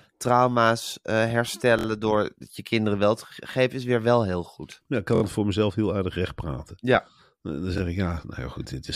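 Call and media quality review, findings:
Repeated buffer: stutters at 1.79–1.86 s and 5.16–5.22 s (one 23.2 ms slice replayed three extra times), 7.78–7.80 s (once). Playout buffer underrun, fits a 1024-sample buffer. Waveform shows identical tiled blocks; spectrogram shows vertical click lines at each hard join.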